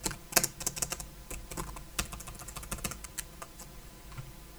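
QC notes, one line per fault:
Throughout, channel delay (comb filtering): one channel arrives around 5 ms behind the other, and when the pair is folded to mono, everything common to both partly cancels at evenly spaced frequencies. The first notch sits near 100 Hz, with further notches repeating roughly every 200 Hz up the spectrum. The sound comes across hollow and phasey, with a fixed colouring that stays put rather than sweeping.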